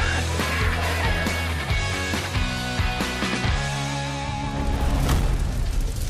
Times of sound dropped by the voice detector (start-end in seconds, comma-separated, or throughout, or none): none